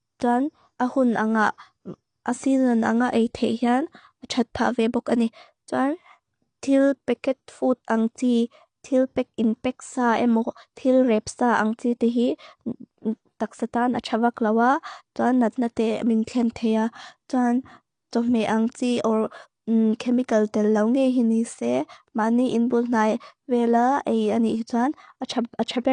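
From start to finish the speech sounds dull and smeared, with a fizzy, warbling texture on sibilants and held sounds, and nothing above 9.8 kHz. This points to AAC compression, likely AAC-LC at a low rate, around 32 kbps. To stay within so few bits the encoder lowers its cut-off and quantises the remaining frequency lines coarsely, leaving gaps or substitute noise in the spectrum that the ear hears as that swirling, muffled quality.

At 10.76 s a sharp onset arrives softened, with a hiss just ahead of it, lasting about 16 ms. This is pre-echo. The transform coder spreads its quantisation noise evenly across a whole block. Because the attack lands late in that block, noise sized for the loud part also fills the quiet moment before it, so the hiss runs ahead of the attack and blurs its edge.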